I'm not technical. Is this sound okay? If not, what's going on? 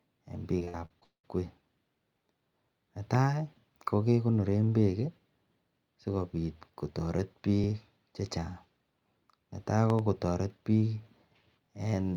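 No, this speech clip has three kinds of problems.

From 0.59 to 1.25 s there is repeated packet loss (robotic sound). Pieces of the transmission went missing six times in quick succession, the longest gap about 0.2 s. Each hole was patched by stretching the previous sound, so about half of that stretch is filler, which sounds choppy.

There are two loud pops: one from 3.15 to 3.17 s, and a double pop from 9.90 to 10.01 s. These are short, sharp bangs on top of the speech, which carries on underneath. The likely cause is an electrical spike, such as from a plug, a switch, static or a driver glitch.

Overlapping chunks cause a brief stutter at 3.61 to 3.64 s, just before "kokegonoren bek", at 7.64 to 7.66 s, just after "sikobit kotaret", and at 11.66 to 11.69 s. The audio was handled in 4-second blocks that overlap, so about 25 ms plays twice at each join.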